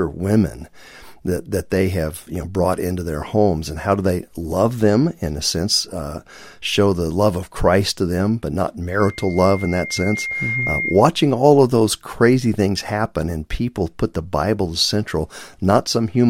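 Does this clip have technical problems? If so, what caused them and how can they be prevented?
Yes. From 9.0 to 11.05 s a single whistle near 2.1 kHz swells over about a second and a half until it is as loud as the speech. This is loudspeaker feedback squeal: the microphone picks up its own loudspeaker, and at that frequency the loop gain exceeds one, so the tone keeps growing. Keeping the microphone behind and away from the loudspeakers, lowering the gain, or notching out 2.1 kHz would prevent it.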